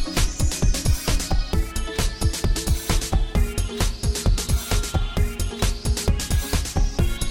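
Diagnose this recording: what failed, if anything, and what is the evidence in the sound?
A switching power supply feeding the analogue stage has dropped into an audible burst mode or is beating with another supply, and its ripple is getting into the signal path through the wiring or shared ground. From 2.21 s to the end of the clip a thin, high whistle sits under the sound, wandering between 2.57 and 2.62 kHz. It stays roughly 40 dB below the signal, and its pitch drifts as the supply's load shifts.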